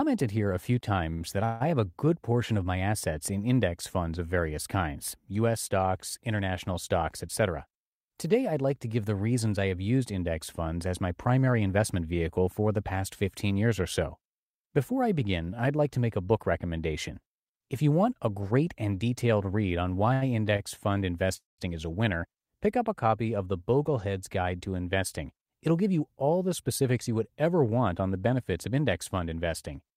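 At 1.13 to 1.23 s a short stall from a late packet holds the last sound for about 72 ms while the jitter buffer sits empty, then the speech resumes with nothing lost. On a spectrogram the harmonics run flat and smeared for that stretch. From 1.45 to 1.62 s a call audio freeze stretches the sound into a fading buzz for 158 ms, likely because packets were held up in transit. It shows as a frozen spectral slice that dims without reaching silence.

From 7.04 to 15.47 s a jitter buffer speed-up runs the speech at 103% with unchanged pitch. Roughly a fifth of a second of pitch periods is trimmed, and the waveform shows tiny splices between cycles.

Further stalls at 20.13 to 20.24 s (83 ms filled) and 20.57 to 20.61 s (20 ms) appear as brief flat, held patches. At 21.37 to 21.60 s a second freeze fills 217 ms, and the last 160 ms falls to silence: a decaying smear, then a blank gap in the waveform.

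From 23.46 to 27.09 s another speed-up at 104% removes about 150 ms.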